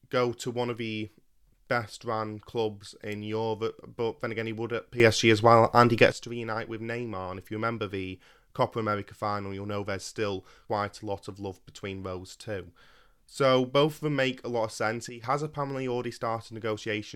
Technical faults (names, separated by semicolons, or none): sudden gain jump